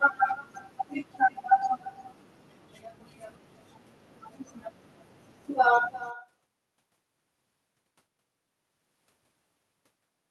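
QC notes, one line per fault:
Throughout, echo with no canceller: every phrase of the speech is trailed by a faint, thin repeat of itself, arriving roughly a third of a second later and sitting about 19 dB below the direct sound, so it reads as a ghostly shadow rather than a distinct second voice. The far end is playing the call out loud, its microphone is catching that playback, and nothing is subtracting it, so the signal returns after the round trip.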